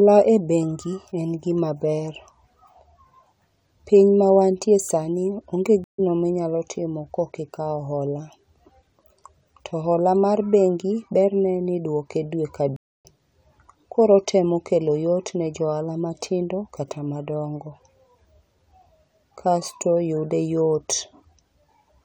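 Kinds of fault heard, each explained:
Stream reconnect: the connection dropped, the player fell silent, then rejoined the live speech with a fresh decoder further along. After "piny mawantie sani onge" at 5.84 s there is about 143 ms of silence and the speech resumes roughly 0.1 s later, at "minyalo timo kokikawo hola". After "berne nidwoke dwe ka" at 12.76 s, about 273 ms of silence is followed by a jump of roughly 0.3 s. Unlike a buffering stall, the missing stretch is skipped rather than delayed.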